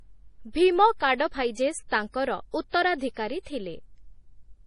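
Heavy MP3 compression is the likely cause throughout, starving the encoder of bits as a 32 kbps stream would: nothing survives above 10.5 kHz, and the speech sounds watery and swirly.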